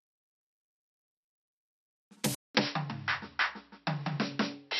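It's a music clip, and at 2.35 s the sound drops out for about 200 ms, then comes back dull, with nothing above 5.6 kHz, a level shift of around 5 dB and a new noise floor roughly 40 dB down. That's likely the input switching to a poorer device, which carries on to the end.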